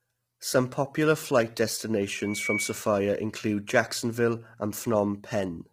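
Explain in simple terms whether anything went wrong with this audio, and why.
Loudspeaker feedback squeal, from 2.18 to 2.90 s: a single high tone near 2.3 kHz swells over roughly a third of a second until it is about as loud as the speech. A microphone is picking up the loudspeaker it feeds, so that one pitch keeps looping and growing.

Low-delay AAC compression, throughout the clip: the speech sounds rough and grainy, with hiss between its tones and a dull or artificial-sounding top end. The likely cause is the fast codec used in video calls, which has too few bits to capture voice detail on a thin connection.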